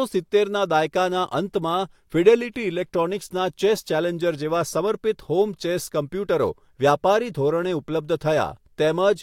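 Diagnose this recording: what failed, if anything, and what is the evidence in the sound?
Nothing failed, and the sound gives no evidence of a fault at any stage.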